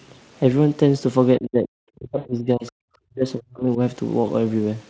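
Speech over a call path whose band ends at 8 kHz shows three kinds of fault. From 1.38 to 1.74 s, 1.96 to 2.74 s and 3.07 to 3.8 s the talker's level drops sharply, by up to about 40 dB. This is likely speech suppressed in double talk, with the echo canceller turning down the near talker along with the far-end echo. Inside the second dip, from 2.17 to 2.27 s, an 80 ms gap is filled with a stretched, fading extension of the preceding sound, which fits four lost 20 ms frames. That is VoIP packet loss concealed by the speech codec, with the decoder extrapolating its last state while lowering the gain. At 2.67 to 2.72 s a brief scrap of the other side's voice leaks through at about 30 dB below the speech, likely left over from incomplete echo cancellation.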